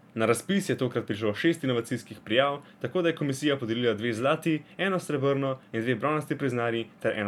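No technical faults can be heard anywhere in the speech, so there is nothing to place in time order.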